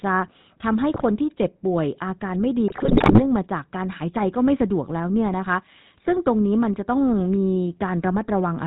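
Speech coded with the GSM full-rate codec throughout, with obvious codec damage: nothing passes above 4 kHz, and the pulse-driven vocal-tract model gives the voice a buzzy, gravelly roughness consistent with the 13 kbps full-rate coder. GSM bit errors break through at 0.94–1.02 s and 2.68–3.23 s. Corrupted filter, pitch and gain values distort the spectrum and level frame by frame, producing squawks, pops and gargling. The first burst is brief. The second lasts about half a second and points to a long run of damaged frames.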